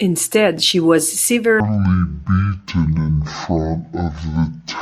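From 1.6 s, after "she was", speech runs at half speed, an octave low: stereo read as mono, its interleaved samples played as one channel.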